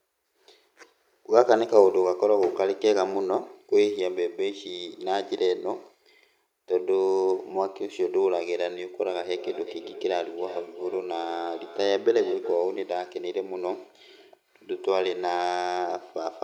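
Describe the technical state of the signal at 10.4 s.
At 10.4 s, a feedback echo between two devices is active (9.08 to 12.71 s): a second device in the room replays the call, and the first microphone recaptures it beyond its echo canceller's reach. The speech repeats roughly every 0.4 s, peaking about 15 dB below the direct sound.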